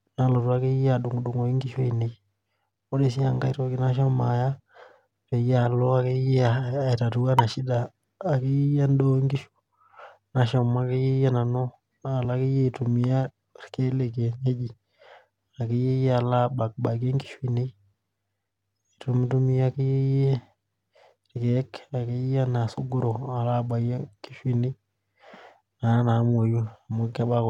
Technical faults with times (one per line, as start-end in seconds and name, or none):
7.39 damaged data in a compressed stream